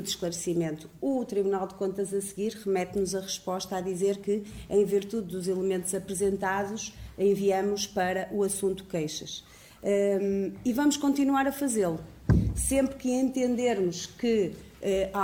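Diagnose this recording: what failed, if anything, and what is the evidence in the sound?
Nothing failed; no faults detected.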